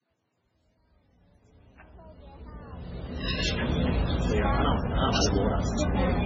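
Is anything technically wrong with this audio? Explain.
Yes, there are two faults.

Throughout the clip, the sound carries two layers of lossy-codec damage at once, most likely from transcoding between lossy codecs. There is nothing above about 7.3 kHz. Two different kinds of codec artefact are heard together. That mix points to a very low-bitrate MP3 re-encoded as Vorbis, with the later encoder wasting its bits on the earlier artefacts. A single low-bitrate encode would show only one artefact character, not two blended together.

From 0.0 to 3.76 s, truncation distortion on a fade affects the fade-in, which rises from about the start of the clip to full level at 3.76 s. Its quiet part is rendered by a gain stage that keeps too few bits and adds no dither, which fits a 12-bit stage. From 0.0 to 2.14 s, where the level is lowest, the waveform collapses into a few coarse steps. The sound is gritty. 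Codec artefacts do not get worse as the level falls, and this grit does, so its link to level sets it apart.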